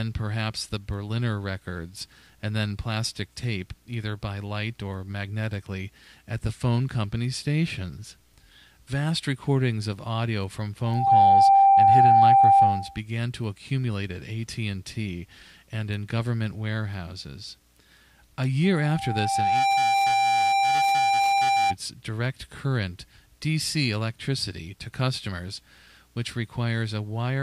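A microphone picking up its own loudspeaker drove the loop past unity gain at 788 Hz, causing loudspeaker feedback squeal. From 10.84 to 13.0 s the tone swells within a fraction of a second to roughly 15 dB above the sound. It returns from 18.64 to 21.75 s, building over about a second to roughly 5 dB above.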